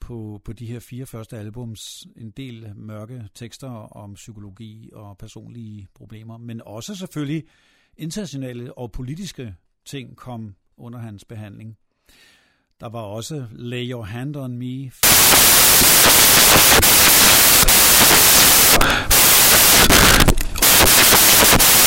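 Samples built from the wrong bytes take over from 15.03 s to the end of the speech, at 21.87 s. The reader assembles each sample from misaligned or swapped bytes, so the rapidly changing low bits land in the high positions. The result is loud, harsh broadband noise, close to white on the louder sounds.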